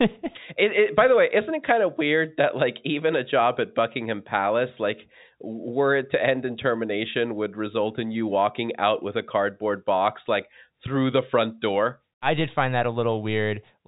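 No technical faults can be heard in the speech, which carries the narrow band of G.711 telephone coding, with nothing above 3.8 kHz getting through.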